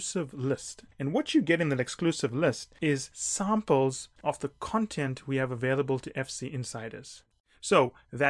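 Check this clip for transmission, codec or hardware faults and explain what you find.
I found no faults to report in this clip.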